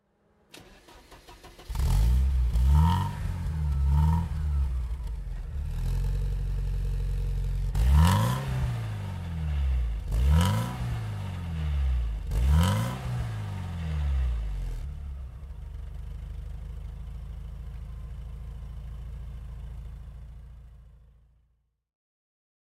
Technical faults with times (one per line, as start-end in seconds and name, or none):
0.00-22.69 sample clock jitter